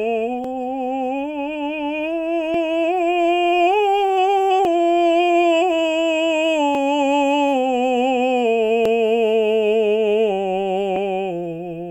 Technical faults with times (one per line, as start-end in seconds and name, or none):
0.44-10.96 clock drift buffer slips